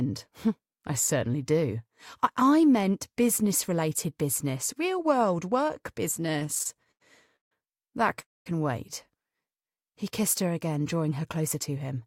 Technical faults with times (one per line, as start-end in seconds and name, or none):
6.22-7.52 repeated stalls (stutter)
8.20-8.47 call audio freeze
9.50-10.43 jitter buffer slow-down